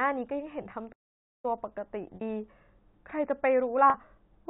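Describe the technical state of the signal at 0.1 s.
At 0.1 s the speech is intact, carried over G.711 telephone coding with its usual band limit below 4 kHz and nothing wrong there.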